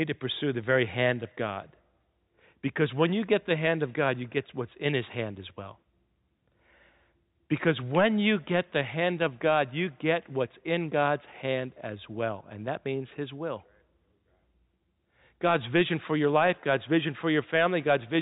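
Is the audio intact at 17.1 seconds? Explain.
Yes, the audio is intact at 17.1 seconds, with no dropout, click or other fault at that moment.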